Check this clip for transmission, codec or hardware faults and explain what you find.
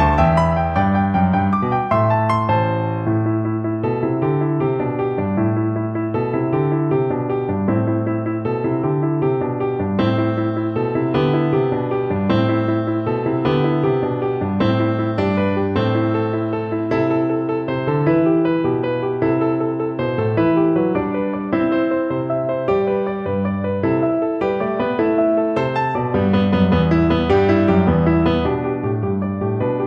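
Nothing stood out on listening to this clip.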